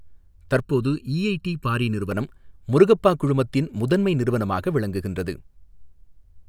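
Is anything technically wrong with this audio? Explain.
Yes. From 0.6 to 2.1 s the speech turns hollow and phasey, a channel delay with comb filtering. One channel lags by under a millisecond, and the mono sum cancels at a first notch near 700 Hz and at evenly spaced frequencies above it. On a spectrogram these appear as steady dark horizontal bands.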